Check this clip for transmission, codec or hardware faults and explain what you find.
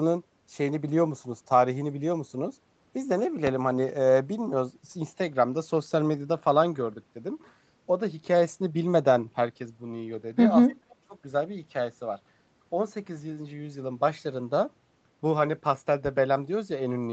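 Two faults stand out in this speech clip: a single loud pop and a short stretch where the talker is suppressed during double talk. Both come through a call path whose audio stops at about 8 kHz, which fits a wideband Opus stream at roughly 32 kbps.

Between 3.47 and 3.51 s there is one loud pop, peaking at about 15 dB above the speech. It is most likely a voltage step or pulse, from a plug, switch, static or driver glitch, added to the signal. Downstream circuitry shapes it into a sharp thump while the speech continues underneath.

From 10.72 to 11.17 s the speech is suppressed in double talk, dropping by as much as roughly 30 dB over most of that span. The likely cause is the echo canceller failing to separate the local talker from the far-end echo while both sides spoke, so it attenuated everything. The voice dips and breaks up in pieces.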